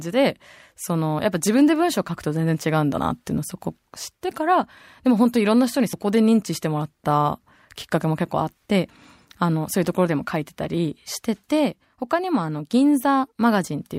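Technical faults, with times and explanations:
5.93 s and 8.89 s: audio missing between chunks. The speech jumps forward abruptly, dropping roughly 40 ms each time with no gap of silence. The skips sit about 3 s apart, likely from a recorder losing audio at each 3 s chunk boundary.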